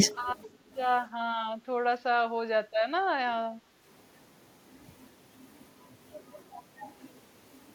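Speech suppressed in double talk appears from 2.06 to 2.11 s in this speech recording: for about 50 ms the voice dips by around 15 dB. This is likely an echo canceller that could not tell the near talker from loudspeaker echo while both were active, so it pulled everything down together. Background gated by the echo canceller follows twice, from 2.68 to 2.83 s (down about 10 dB) and from 3.58 to 3.81 s (down about 8 dB). In each case the canceller clamped the microphone hard while the loudspeaker played, so the room sound sinks and then comes back once the suppression releases.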